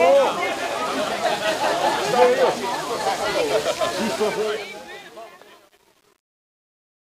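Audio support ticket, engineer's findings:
Truncation distortion on the fade-out, 4.13 s to end of clip, worst from 4.59 s. The tail turns gritty. The fade or gain stage likely keeps only about 9 bits without dither, so the decaying sound collapses into square steps.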